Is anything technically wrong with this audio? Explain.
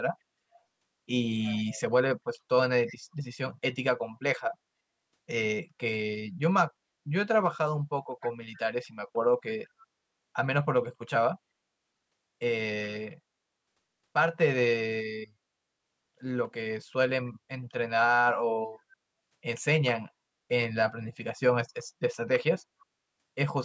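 Yes, there is echo leak. Most likely, the far end was on a loudspeaker and its echo canceller failed to fully suppress what its microphone picked up, so part of the speech returned about 285 ms late. The delayed copy is faint, roughly 20 dB below the speech, and appears as brief ghostly scraps from 1.42 to 1.81 s, 2.86 to 2.96 s and 8.22 to 8.29 s, while the call's microphone processing caps the band at 8 kHz.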